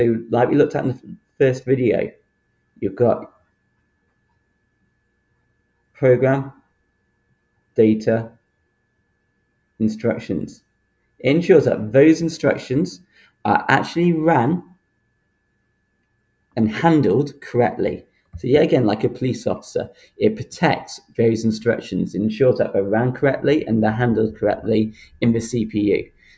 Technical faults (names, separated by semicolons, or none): noise suppressor applied to music or sounds; sound cut by the noise suppressor